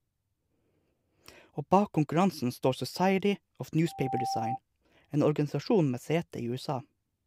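A speech recording with loudspeaker feedback squeal from 3.87 to 4.59 s: a 783 Hz tone swells over roughly a third of a second to about 5 dB below the speech, showing as a bright horizontal spectrogram line.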